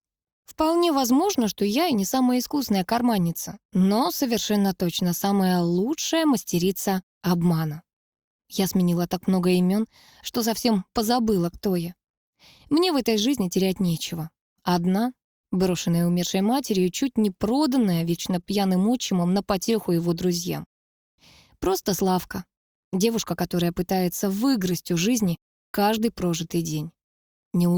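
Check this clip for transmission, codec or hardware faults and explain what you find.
Three related timing faults are present, all stemming from the sender's clock running slow.

Clock drift between sender and receiver runs through the whole clip. The sending device's sample clock runs roughly 1% slower than the receiving end. Because audio arrives slightly more slowly than it is played out, the jitter buffer keeps draining. The receiver has to patch the gap continually, so small timing irregularities turn up at uneven intervals from start to finish.

Repeated timing corrections run from 0.44 s to 27.13 s. To cope with the slow sender, the receiver keeps inserting short repeated fragments, all in the same direction. This leaves the audio running at about 99% of its proper pace. Over the stretch the additions total roughly a third of a second. Each edit is tiny and unevenly spaced, so it comes across as faint hiccups and a slightly unsteady, dragging tempo rather than as distinct glitches.

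A short stall from a late packet occurs at 18.41 to 18.45 s. A packet missed its playout deadline and the buffer, already running lean, ran empty. The receiver held the last sound for 17 ms until the data arrived, then resumed from the same point. Nothing is lost, but the delay grows by 17 ms, and that moment is briefly drawn out with a slight buzz or dip.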